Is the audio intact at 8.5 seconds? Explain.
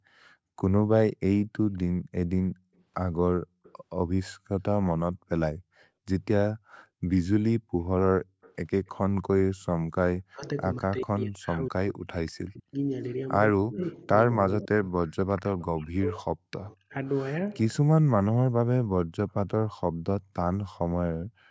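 No. From 8.42 to 8.89 s a faint, delayed copy of the speech trails it by about 191 ms, heard as a ghost well below the main voice. This is an echo leak, likely a loudspeaker's sound reaching the far microphone and slipping past the echo canceller.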